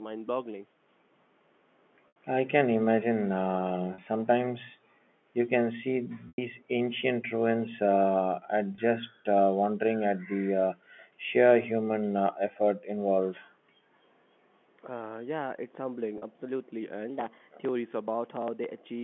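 Speech heard over a telephone-band line has five brief held, buzzy moments where the voice seems to stick on one pitch before carrying on. They fall at 2.08 s (80 ms), 3.94 s (40 ms), 6.28 s (100 ms), 8.76 s (20 ms) and 16.18 s (40 ms). This is packet loss with pitch repetition. Audio packets went missing, and the receiver filled each gap by repeating the last pitch cycle while fading it down. The gap lengths fit lost runs of 20 ms packets. At 6.28 s the 100 ms gap is long enough that the repeated tone audibly thins toward silence before the speech returns. The room sound also drops out sharply at 9.02–9.13 s and again, for longer, at 11.71–11.98 s, falling by about 40 dB before snapping back. This is background gated by the echo canceller: while the far side's audio played through the loudspeaker, the canceller turned the microphone down hard to keep that sound from returning as echo, then released it. 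At 10.41–10.47 s the talker's voice briefly dips by about 15 dB for roughly 70 ms. This is speech suppressed in double talk, most likely because both sides spoke at once and the canceller could not separate the near voice from the loudspeaker echo, so it pulled everything down for a moment.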